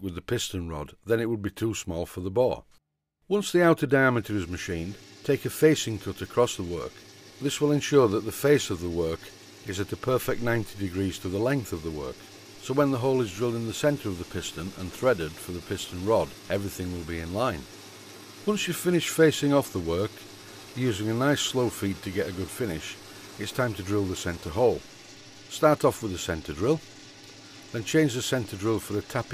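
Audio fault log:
Nothing to log here; the audio runs along without any technical faults to flag.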